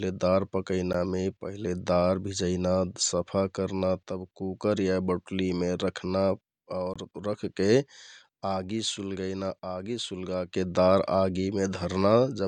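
Speech, broken twice by short, hard-edged dropouts into silence: a 14 ms hole at 0.93 s and a 20 ms hole from 6.94 to 6.96 s. These are gaps between stream segments. The timestamps of consecutive 6-second segments fail to meet, so the player fills the space with silence. The gaps add time, and no audio is lost.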